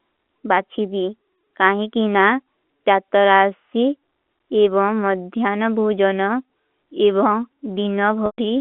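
At 8.26 s the speech drops out for 120 ms, until 8.38 s. This is packet loss with pitch repetition. The receiver repeats the last pitch period, briefly holding a buzzy tone. It fades to silence within about 50 ms, and the 120 ms gap fits roughly twelve lost 10 ms packets over the G.711 telephone line.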